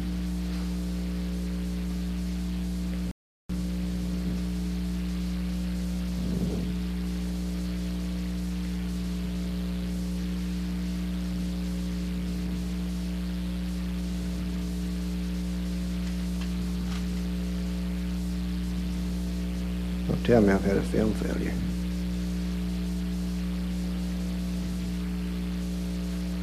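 At 3.11 s there's a rebuffering stall: playback ran dry waiting for more data, so the audio drops to silence until 3.49 s, then picks up exactly where it left off. Nothing's missing, it just adds a 0.38 s gap.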